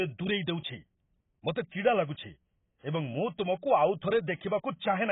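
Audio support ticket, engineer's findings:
AAC compression, likely cause. Speech dull and smeared for the whole clip, sibilants blunted. Spectrogram shows a hard ceiling near 3.8 kHz with nothing above. Heavy damage fits AAC-LC at a very low bitrate, around 16 kbps, quantising coarsely against its hearing model.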